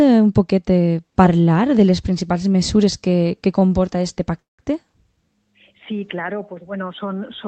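Audio carried over a call link, band-limited at about 8 kHz with codec coding noise, has two timing faults. At 3.59 to 3.63 s there is a short stall from a late packet: a packet missed its playout slot, the jitter buffer emptied, and the receiver held the preceding sound for roughly 20 ms before resuming from the same point. Nothing is lost, but that instant is stretched with a faint buzz or dip, and everything after it is shifted about 20 ms later. From 4.39 to 4.60 s comes a call audio freeze. The sound drops out for about 190 ms, mostly as silence with only a brief tail of continued sound at its start, then resumes exactly where it stopped. The likely cause is packets held up in transit, draining the jitter buffer until they arrived. No content is skipped, but the gap pushes the rest of the audio roughly 190 ms later.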